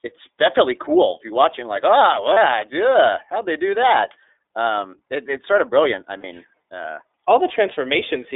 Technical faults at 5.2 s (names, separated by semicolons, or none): iLBC codec